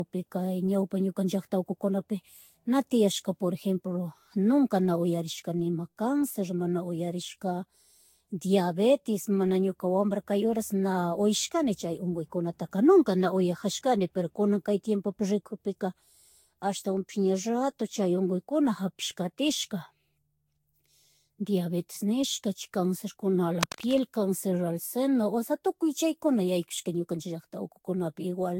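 From the start, the speech has generation loss. It sounds swirly and hollow, and consonant attacks are blurred and soft. Nothing is heard above 16.6 kHz. The damage is heavier than one encode would leave. This is likely from the audio being decoded and re-encoded several times, perhaps five, with a Vorbis-type codec near 64 kbit/s. Each new pass quantises on a shifted frame grid. The noise and spectral holes pile up.

From 23.61 to 24.00 s there is cable scratch noise. It is a dense, uneven burst of scratching and rustling over the speech. It lasts about 0.4 s. It is loud, only a few decibels below the speech itself. The likely cause is a worn cable, connector or control being moved. Its contact resistance jumps around rapidly, and that injects the crackle into the signal.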